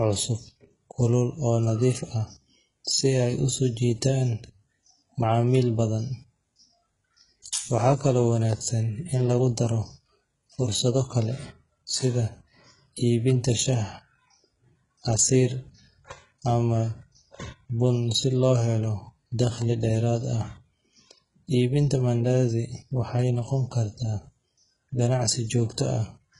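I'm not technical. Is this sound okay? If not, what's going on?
No. Throughout the speech, the s sounds come out gritty and metallic, which likely comes from heavy HE-AAC compression. Unlike a simply muffled recording, the treble still sounds bright, but it is rebuilt from copied lower sound, with nothing at all above about 11 kHz.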